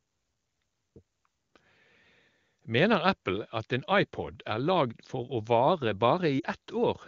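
At 6.39 s to 6.46 s the speech briefly drops to near silence for about 40 ms, which fits two lost AMR speech frames in a row. The AMR-WB decoder bridges the gap by repeating the last good pitch and vocal tract settings at falling gain, so the sound smears and weakens, and the voice comes back weak or rough for a moment.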